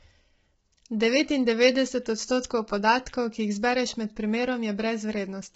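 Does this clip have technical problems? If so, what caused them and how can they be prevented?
Yes. The speech sounds rough and grainy the whole way through, with noise between the harmonics and nothing above about 7.8 kHz. That's likely low-delay AAC compression (AAC-ELD) starved of bits, with damage this heavy pointing to something around 16 kbps. With so few bits, its coarse quantization leaves noise between the pitch harmonics. To prevent it, give the call codec more bitrate or use a codec tuned for speech at low rates.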